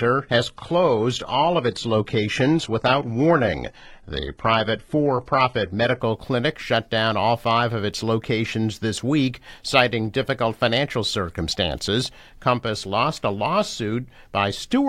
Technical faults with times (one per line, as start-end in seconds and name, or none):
0.00-6.00 adaptive stream starting at a low bitrate